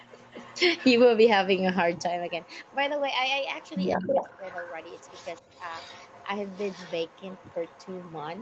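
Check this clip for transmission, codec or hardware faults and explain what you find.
Two kinds of fault run through this speech: a recurring echo leak and one brief spot of speech suppressed in double talk. The band tops out at 8 kHz throughout, which fits a wideband Opus call path.

Echo leak: A faint, delayed copy of the other side's voice trails underneath at 0.00–0.59 s, 0.76–0.92 s, 1.56–1.61 s, 1.96–2.03 s, 2.29–2.75 s, 3.43–6.26 s and 6.48–8.41 s. It lags by 176 ms at the start and drifts to 203 ms by the end. It is mostly well buried, but it is loudest in the long 3.43–6.26 s stretch, about 15 dB below the speech. The likely cause is a loudspeaker on the far end whose echo canceller let part of the playback through, so the audio was returned to the line.

Speech suppressed in double talk: From 3.97 to 4.21 s the talker's level dips by about 15 dB, for roughly 0.2 s in total. This happens inside the strongest echo stretch, so the two voices overlap there. 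The likely cause is the echo canceller failing to separate the near talker from the returned echo. It then pulled down everything during the overlap, including the wanted speech.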